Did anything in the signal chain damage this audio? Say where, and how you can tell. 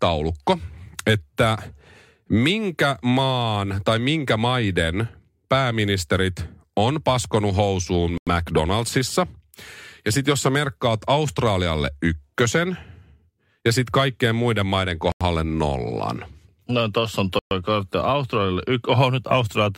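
Yes. The speech cuts to complete silence three times, at 8.18 to 8.27 s (93 ms), 15.12 to 15.21 s (89 ms) and 17.39 to 17.51 s (121 ms). This is likely a Bluetooth stall on the wireless playback link: held-up packets let the headphone buffer run empty, so output paused until data arrived. Unlike codec packet-loss concealment, there is no smeared or synthesised fill, just clean gaps of around a tenth of a second.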